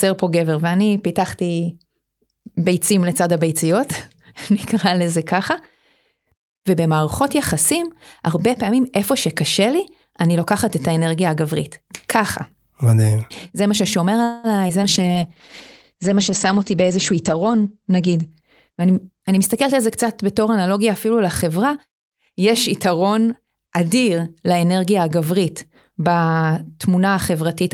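From 14.23 to 14.47 s the sound stops moving forward. What is heard is the last sound carried on as a fading buzz or hiss. This is a call audio freeze. The likely cause is packets held up in transit until the jitter buffer ran dry. The receiver filled about 204 ms with stretched-out sound. Then playback picked up exactly where it stopped. Nothing was lost. A gap was inserted instead, and the delay grew by that 204 ms.

Two skip ahead events follow, at 14.68 to 14.72 s and at 14.81 to 14.85 s. Each time, playback jumps forward. Roughly 70 ms of speech vanishes at each point. Only a tiny join of about 10 ms covers the seam. The two sides butt together almost directly, so the speech lurches. Dropping that audio pulled back some of the delay added by the freeze, about 50 ms per jump.

A call bitrate drop runs from 14.94 to 20.90 s. The bandwidth estimate fell, and the encoder was pushed from 48 kbps down to 12 kbps. 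It stayed at the bottom for about 3 s. At that rate the coder works coarsely and discards the top of the spectrum. The audio bandwidth narrows from 20 kHz to 8 kHz. Speech turns muffled and rough, with a watery edge, until the rate climbs back.

Inside that stretch come two jitter buffer slow-down events. The first runs from 15.01 to 15.29 s at 88% speed and adds 40 ms. The second runs from 15.95 to 16.60 s at 94% speed and adds 48 ms. The buffer was short of reserve. So the receiver repeated single pitch periods over and over. The pitch holds steady, but the speech drags. Sounds are drawn out.

Straight after, from 16.62 to 18.19 s, a jitter buffer speed-up sets in. Now the buffer held more than its target. The receiver cut short slices of one or a few pitch periods, repeatedly. Roughly 200 ms was removed in total. Playback runs at 112% speed with unchanged pitch. The speech sounds hurried.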